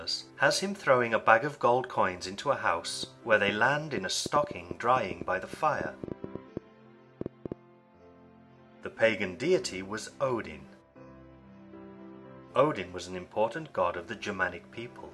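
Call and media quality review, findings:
Train of clicks, 3.03 to 7.53 s: uneven ticking over the sound and in pauses, about 5.4 clicks per second, around thirty in all, similar in shape, peaking roughly 10 dB above the signal. Likely interference from nearby equipment or a faulty connection or power supply injecting repeated pulses.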